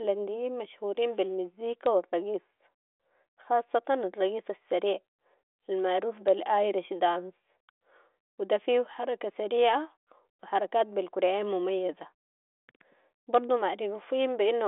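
The speech comes over a telephone-band G.726 ADPCM path at 40 kbit/s, with the band spanning roughly 300 Hz to 3.5 kHz, nothing above about 3.8 kHz, and at most faint coding hiss tracking the voice level.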